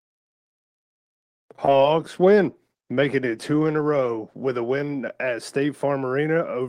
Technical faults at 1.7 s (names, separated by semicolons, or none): short concealed packet loss